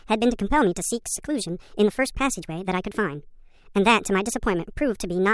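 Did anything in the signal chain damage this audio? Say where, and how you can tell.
Yes: a wrong sample rate runs throughout at playback. The speech is 1.5 times too fast and 7 semitones high, which fits 16 kHz audio played at 24 kHz without conversion.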